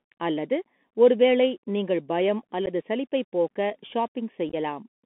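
Throughout the 5-second speech clip, one channel lags the other by a little under half a millisecond, and the two are summed to mono. This is channel delay producing comb filtering. Energy common to both channels cancels at evenly spaced frequencies, with the first notch around 1.5 kHz and further notches repeating above it. The fixed notches give the voice a hollow, slightly phasey colour that stays in place regardless of what is being said.

The whole clip also carries the Bluetooth CVSD headset codec. The passband runs only from 200 Hz to 3.5 kHz, which fits a 64 kbit/s CVSD link. This continuously variable slope delta modulation sends one bit per sample to step the waveform up or down with an adapting step size. The narrow band removes all brightness, and the codec damage is plainly audible. Loud, fast-rising high content outruns the step size and distorts, sibilants come out scratchy, and a granular hiss sits under the speech.

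Three bursts of unconcealed Bluetooth headset packet loss break the signal, each leaving silent holes with abrupt edges. From 1.58 to 1.64 s, about 37.5 ms is missing, scattered across 60 ms with the longest gap 11.2 ms. This points to around ten lost packets and produces a brief chopped crackle. At 2.66 to 2.68 s, a single 11.2 ms hole suggests about three packets. From 4.49 to 4.55 s, 30 ms is lost within 37.5 ms, with the longest gap 15 ms, roughly seven packets.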